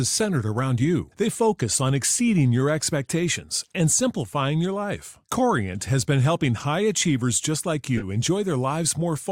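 At 5.29 s a corrupt frame decoded gives a faint blip, peaking at only about -50 dBFS. From 7.97 to 8.06 s, across about two frames, a loud chirp peaks near -10 dBFS. Damaged bits put energy at wrong frequencies, unlike a lost frame's gap or smear.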